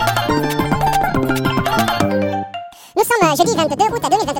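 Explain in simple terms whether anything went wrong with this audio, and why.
Yes, something went wrong throughout: the audio was read two samples at a time (double speed). The player grabbed samples in pairs, so everything runs twice as fast and an octave higher. Unlike a pitch shift, the timing speeds up too.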